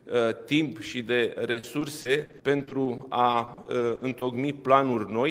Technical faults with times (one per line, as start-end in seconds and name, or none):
1.51-4.23 repeated packet loss (robotic sound)